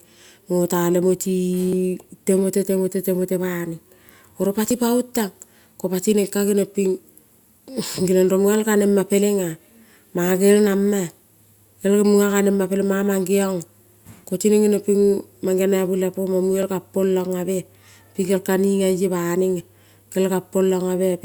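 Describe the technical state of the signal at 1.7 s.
At 1.73 s there is a brief skip, just before "timote temote temote": audio missing between chunks. Around 20 ms of sound is gone and the two sides butt together with no gap, so it registers as a tiny jump or tick rather than a pause. The likely cause is a recorder working in 3-second blocks dropping a slice at the handover. On a waveform the trace steps abruptly; on a spectrogram a thin vertical broadband line marks the join.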